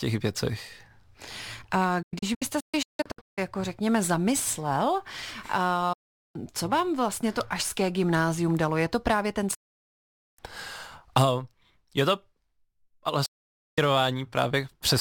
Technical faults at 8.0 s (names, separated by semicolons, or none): none